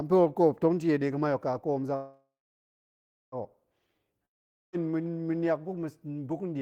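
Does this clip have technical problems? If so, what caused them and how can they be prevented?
Yes. From 1.95 s to 3.35 s there is a call audio freeze, likely caused by packets being held up in transit until the jitter buffer ran empty. The receiver stretches the last sound into a fading buzz, then about 1.0 s of near silence, filling roughly 1.4 s in all. When the packets arrive, the speech resumes exactly where it stopped. Nothing is lost, but everything after runs about 1.4 s late. An adaptive jitter buffer with more headroom, plus prioritising voice traffic on the network, would prevent this.

From 4.25 s to 4.76 s there is a long network dropout, likely caused by a stretch of packets that never arrived at all. The receiver again continues the last sound as a brief fading buzz, then about 0.47 s of silence. When the audio returns with "ma̱niak buk ma̱ buk", roughly half a second of speech has simply been skipped and is gone for good. 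A more stable connection with forward error correction or redundant packets would prevent this.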